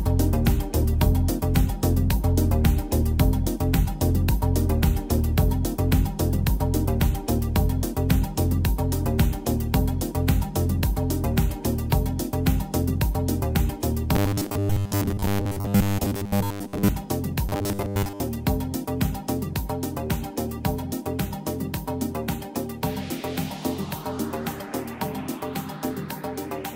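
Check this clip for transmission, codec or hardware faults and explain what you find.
Robotic sound from repeated short buffers, from 14.15 to 16.88 s and again from 17.49 to 18.21 s. The likely cause is audio arriving too seldom, so playback repeats roughly 10 ms buffers over most of the skipped audio, imposing a rigid, metallic 100 Hz buzz.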